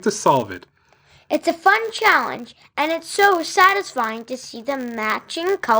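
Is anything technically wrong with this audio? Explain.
Yes. For the whole clip, a steady 100 Hz buzz rides on the speech and grows and shrinks with its loudness, louder on strong syllables and nearly gone in the pauses. This is a filter restarted on every block. Each block is filtered as if it began from silence, so the filter's memory of the previous block is lost and a small transient appears at every boundary. At 100 per second, that points to a block length of 10 ms.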